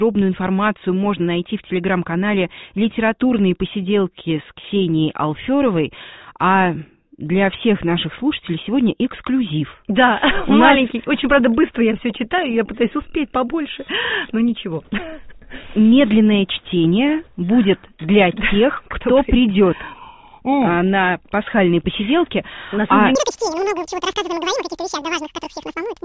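From 23.15 s to the end, a wrong sample rate: double speed, an octave high, which fits 8 kHz audio played at 16 kHz.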